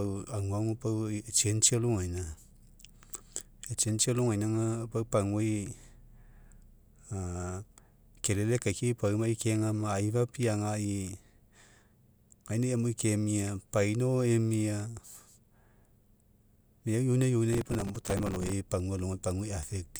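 From 17.53 to 18.52 s, processor overload crackle tears through the speech. The processor keeps missing its deadlines for tiny buffers of a few milliseconds. Dozens fail over that stretch. Each gap is filled with stale audio, so hard edges pile into gritty crackle.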